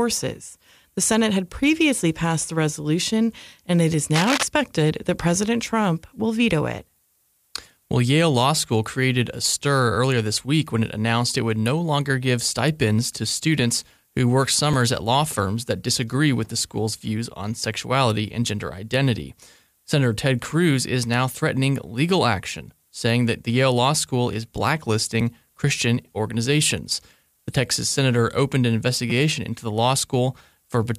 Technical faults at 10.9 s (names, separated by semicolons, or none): none